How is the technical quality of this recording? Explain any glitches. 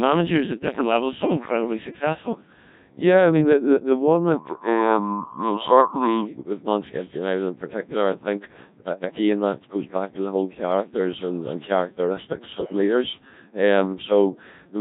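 Technical quality is poor throughout, because the whole recording has passed through the Codec 2 vocoder, and the damage is heavy. From start to finish the speech is robotic and buzzy. That character fits a very low rate of about 1.3 kbit/s. The decoder rebuilds the voice from sine waves using only pitch, voicing, energy and a coarse spectral envelope, so the original waveform is lost. A spectrogram shows neat synthetic harmonic stripes under a smeared, blocky envelope, and the waveform looks regular and unnatural.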